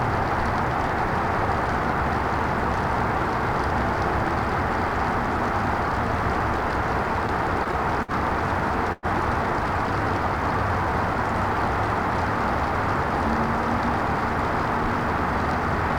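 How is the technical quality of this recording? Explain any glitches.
The recording has two network-related glitches around the midpoint, both in the delivery of the sound rather than in the sound itself.

From 7.27 to 8.11 s there are repeated stalls (stutter). The audio catches four times, briefly smearing the last sound forward, with the longest hold about 58 ms and roughly 89 ms filled in total. Packets arrived late and the jitter buffer kept running dry, so the receiver stretched what it had. Nothing is lost, but the sound drags.

At 8.92 to 9.06 s comes a call audio freeze. For about 105 ms the last sound is held as a fading buzz or hiss rather than dropping to silence, then the audio resumes where it stopped, now 105 ms later. Packets were likely held up in transit, emptying the buffer and inserting a gap.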